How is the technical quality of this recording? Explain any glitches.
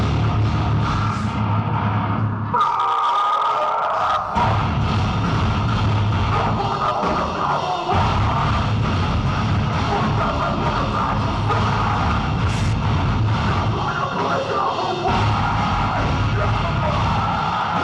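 No technical faults are audible.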